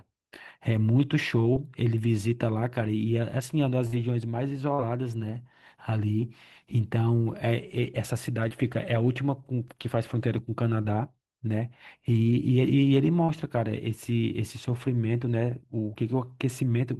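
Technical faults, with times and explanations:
1.53–1.57 s, 4.74–4.80 s, 8.48–8.52 s, 10.82–10.86 s and 13.24–13.30 s: short concealed packet loss. Each time, 20 to 40 ms of the call arrived too late to decode, so the receiver bridged the hole by extending the sound just before it. Voiced stretches were continued at their pitch and unvoiced ones as shaped noise, then blended back into the real signal. Each gap comes across as a brief smear or wobble in the speech.
3.87–3.94 s: burst of packet loss. About 60 ms of consecutive audio was lost or arrived too late to play, which is too long for a seamless patch. The receiver kept the last sound going for roughly 53 ms and turned it down as the gap went on. That gives a short held buzz or fading hiss, depending on what came before. The speech then picks up further along, and the part in between is simply gone.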